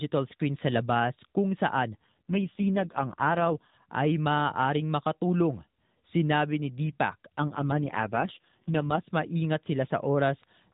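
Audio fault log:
1.94–3.75 s and 7.40–9.09 s, AMR rate drop: The narrowband mobile codec falls back to a lower mode, consistent with 12.2 to 4.75 kbps. The band and timing stay intact. The sound turns buzzier and more synthetic, then recovers before "ay maaaring makatulong" in the first case.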